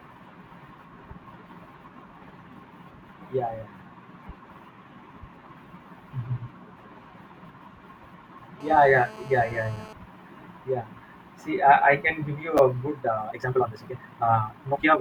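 At 7.46 to 7.49 s and again at 12.57 to 12.59 s, chunks out of order: a 10 ms chunk was written two chunks late, then one chunk late, so the speech briefly jumbles. From 8.61 to 9.93 s, GSM phone buzz: a nearby 2G phone in a call pulsed at 217 Hz, and the rectified bursts add a steady, raspy, harmonic-rich buzz about 20 dB below the speech. From 12.99 s to the end, the pace jumps to 1.88 times faster with unchanged pitch, sounding rushed, likely a time-stretched section squeezed by dropping short pieces.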